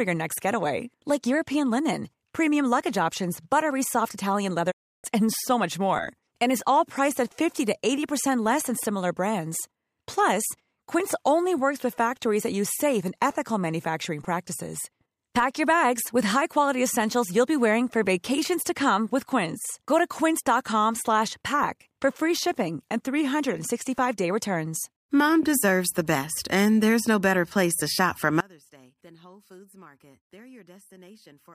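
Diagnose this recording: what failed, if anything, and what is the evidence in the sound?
Digital broadcast dropout, 4.70 to 5.06 s, at the reception and decoding stage. The speech quickly fades over about 20 ms into 320 ms of silence, then resumes further along. This fits ten corrupted frames of about 32 ms each that the receiver muted, discarding their content.

Audio dropout to a faint residue, from 28.40 s to the end, at the analogue wiring stage. The speech drops abruptly, leaving only a faint trace roughly 30 dB below normal level. The likely cause is a broken source connection while the downstream path stayed live.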